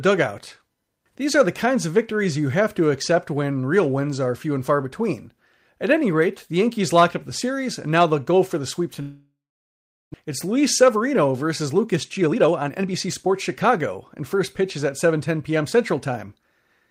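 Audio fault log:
9.01 to 10.16 s, long network dropout: the speech breaks into a fading buzz that trails off into about 760 ms of silence, then resumes later with roughly 600 ms of speech gone. Likely a stretch where no packets arrived, so the receiver stretched the last sound before giving up, and the overall delay shifted by about half a second.
11.73 to 14.62 s and 15.05 to 16.38 s, jitter buffer speed-up: the speech sounds hurried at unchanged pitch, running 13% fast in the first stretch and 5% fast in the second. The receiver trimmed short pitch-period pieces repeatedly to drain excess buffered audio, removing roughly 400 ms and then about 70 ms.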